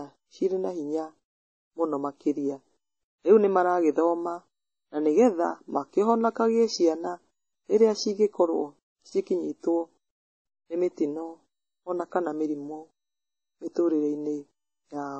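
The speech is dull from start to finish. Nothing sounds above about 8.3 kHz, and two layers of swirly, smeared artefacts sit over each other. This points to transcoding between lossy codecs, likely a low-rate MP3 passed again through WMA at a similar rate.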